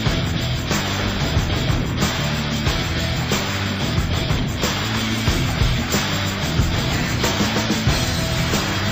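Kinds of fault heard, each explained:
Nothing here stands out as a fault; the sound just runs along without any technical trouble catching the ear.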